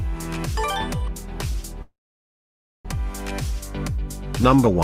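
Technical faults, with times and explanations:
1.82–2.86 s, call audio freeze: the last sound carries on briefly as a fading buzz, then falls silent for about 0.93 s. The audio then resumes exactly where it stopped, nothing lost, but about 1.02 s late. Held-up packets likely emptied the jitter buffer.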